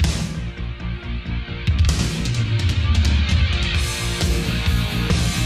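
At 1.04 s, a handful of samples were likely dropped from the stream, a fraction of a millisecond's worth, so the waveform leaps straight to a later value. These dropped samples are far too brief to remove any sound, producing one sharp click.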